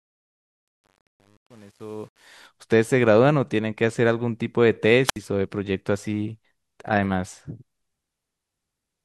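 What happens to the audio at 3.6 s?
At 3.6 s the speech carries on cleanly, with no dropout, click, distortion or level change to be heard.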